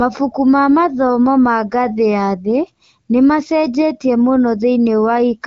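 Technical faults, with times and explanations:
No technical faults are present in this speech, which has passed through the AMR wideband (HD Voice) codec at 12.65 kbit/s with only light coding damage.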